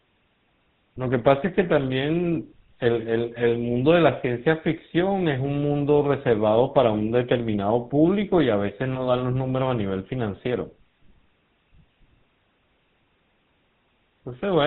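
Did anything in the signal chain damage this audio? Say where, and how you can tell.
Yes, at the codec stage: GSM full-rate coding throughout, with buzzy, gravelly pulse-driven roughness and nothing above 4 kHz, which fits a 13 kbps full-rate coder.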